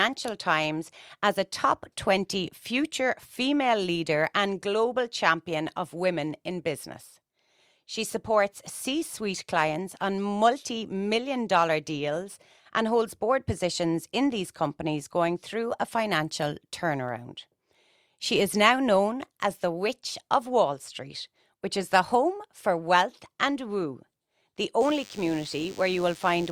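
From 24.80 s to the end of the speech at 26.52 s, a DECT cordless phone buzz appears. A nearby handset or base station is sending a radio burst every 10 ms, and the audio circuitry rectifies that energy, giving a thin, steady 100 Hz buzz rich in harmonics, sitting well below the speech level. On a spectrogram it shows as evenly spaced horizontal lines at multiples of 100 Hz; the waveform carries regular spikes every 10 ms.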